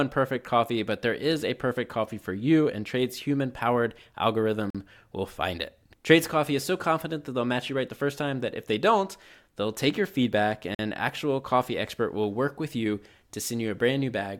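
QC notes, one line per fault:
4.70–4.75 s and 10.75–10.79 s: gap between chunks. The speech drops out for 44 ms each time, then resumes with nothing missing. The audio was split into 6 s chunks, and silence, likely from codec padding or a late chunk start, was left at each join.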